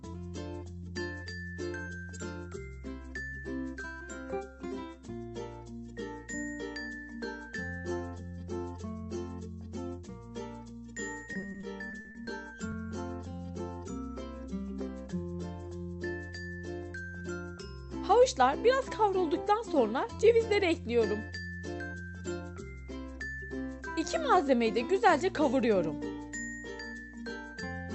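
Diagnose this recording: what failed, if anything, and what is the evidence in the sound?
Network side: repeated packet loss (robotic sound) at 11.33–12.29 s; holes up to 40 ms get patched by repeating the last sound, hence the choppy texture.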